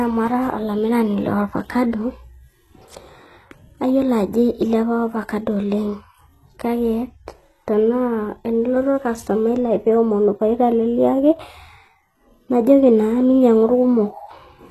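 From start to finish the speech carries plainly audible HE-AAC compression damage. The sound points to a low bitrate around 16 kbps, likely from that codec. Its treble, rebuilt from copied lower bands, makes s sounds gritty and metallic. A spectrogram shows blocky, smeared upper bands ending abruptly near 12.3 kHz.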